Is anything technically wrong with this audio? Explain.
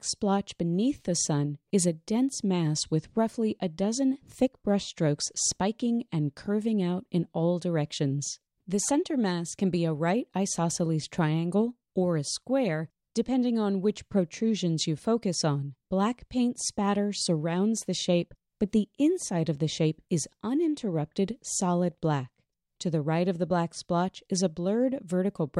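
No, nothing technically wrong can be heard in this audio. There is no point in the recording where a problem in capture, processing or playback shows itself.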